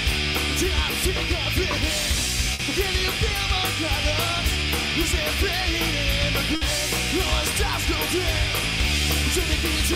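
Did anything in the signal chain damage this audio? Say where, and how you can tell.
Yes. At 2.53 s and 6.55 s the sound smears into a held, fading tail for about 60 ms, then jumps ahead with 60 ms gone. This is a burst of packet loss in the network: the receiver extended and faded the last audio before resuming.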